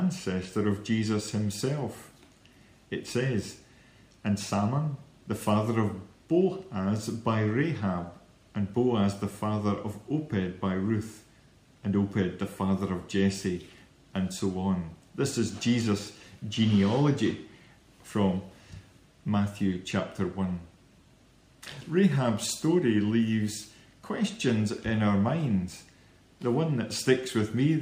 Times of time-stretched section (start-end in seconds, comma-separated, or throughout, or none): none